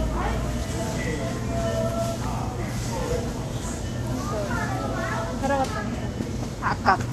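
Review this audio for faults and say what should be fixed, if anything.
Vorbis compression runs through the whole clip, with plainly audible codec damage. The top end stops sharply, with nothing above 14.2 kHz, and the treble below that cut-off turns hissy and grainy. That fits Vorbis at a low bitrate, around 36 kbps: the encoder keeps a smooth spectral outline but quantises the upper detail so coarsely that it becomes noise of similar energy, roughening tones and softening attacks throughout. Re-export from the original source at a higher Vorbis quality setting, or keep a lossless master so the low-bitrate encode is never the only copy.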